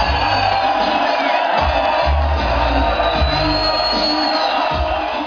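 No technical faults are audible.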